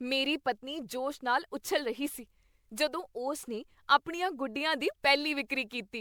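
Throughout the speech, swirly, hollow smearing and blurred attacks point to generation loss, likely about seven MP3 re-encodes at roughly 128 kbit/s. A single pass would not smear this much.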